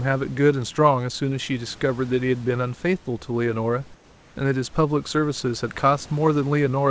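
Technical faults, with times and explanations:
3.94 to 4.36 s, comfort noise in place of the background: For 0.42 s the room's real background gives way to a smooth, featureless hiss. It is about 2 dB quieter than the noise around it. That background sits about 30 dB below the loudest sound. The likely cause is discontinuous transmission. The sender stopped sending during the pause. The receiver then filled the gap with synthetic noise of a similar rough shape. The call path's cut-off near 8 kHz, which fits G.722, stays in place.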